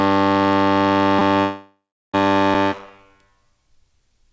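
Around 1.19 to 1.21 s there's a quick repeated buffer: a tiny 5 ms slice of the music plays five times back to back, hard-joined each time, so it comes across as a brief click-buzz rather than a stutter. Nothing actually gets skipped.

Then from 1.40 s to 2.15 s comes a long dropout, likely a network one. The receiver smears the last sound into a fading buzz, leaves about 0.35 s of silence, and the music picks up at 2.15 s with about 0.74 s simply gone. All of it sits inside the band-limited call sound, with nothing above 8 kHz, which fits a G.722 link.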